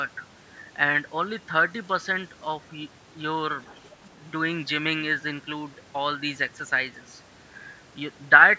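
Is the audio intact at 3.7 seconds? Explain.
No. At 3.7 seconds you're inside a short stretch, 3.66 to 3.96 s, of the other side's voice leaking through: a faint second voice, well below the speech. It's likely loudspeaker playback that the echo canceller didn't fully remove from the microphone.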